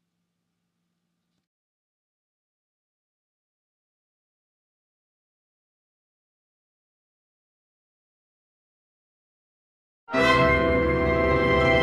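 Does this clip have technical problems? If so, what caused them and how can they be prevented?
No, the signal holds steady throughout, with no dropouts, distortion, interruptions or other technical faults to trace back to a cause or to prevent.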